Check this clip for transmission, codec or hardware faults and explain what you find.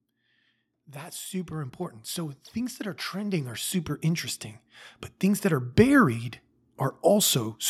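One fault turns up. From 0.92 to 4.36 s the speech and the room noise behind it swell together by about 10 dB. That is automatic gain rising: the gain control judged the input too quiet and raised its gain slowly, lifting everything at once.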